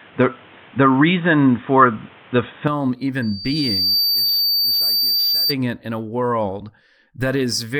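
From the start to 2.68 s the speech is dull and boxy, with nothing above 3.8 kHz. It brightens at 2.68 s with no gap. An input switched to a poorer device is the likely cause.

At 3.22 s a loudspeaker feedback squeal begins: a 4.6 kHz tone swells over about 0.7 s to roughly 5 dB above the speech. It stops at 5.55 s, just before "it in a world".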